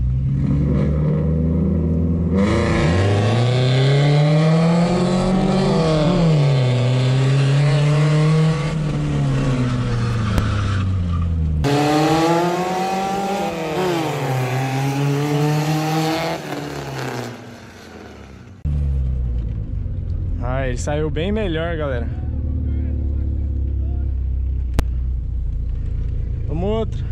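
At 10.38 s and again at 24.79 s, invalid numbers at full scale produce a single hard bang. A calculation returned infinite or invalid values that pinned the output to one extreme value. Each block lasts about 3 ms and 5 ms, fitting 128- and 256-sample blocks.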